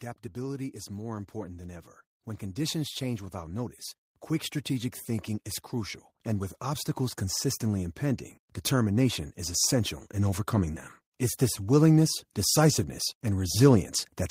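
From 0.33 to 3.8 s there is automatic gain rising: the gain control judged the input too quiet and raised its gain gradually, by about 7 dB. Speech and background swell together across those seconds, settling just before "quick strategic thinking is".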